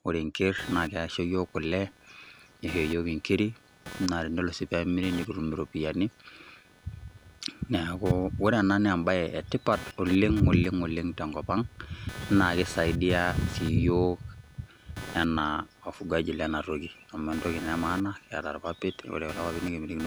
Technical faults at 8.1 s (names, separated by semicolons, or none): computer activity noise